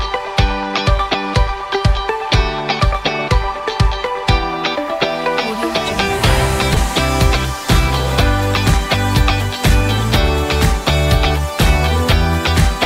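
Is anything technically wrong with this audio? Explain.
No, nothing technically wrong is audible anywhere in this recording.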